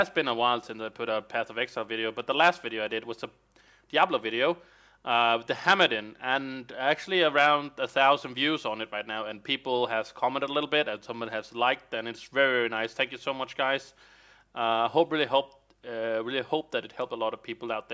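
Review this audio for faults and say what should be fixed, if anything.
No faults; nothing to fix.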